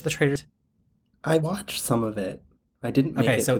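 At 0.35 to 0.37 s there is a skip ahead: around 0.7 s of speech was dropped while later audio already waited, and playback joins the two sides with no filler. A spectrogram shows harmonic tracks jumping abruptly, with no silent gap.

From 0.45 to 3.51 s a jitter buffer speed-up trims short pitch-period pieces repeatedly, running speech about 9% fast and shedding roughly a third of a second. It sounds hurried but keeps its pitch, with unchanged harmonic spacing and compressed syllables.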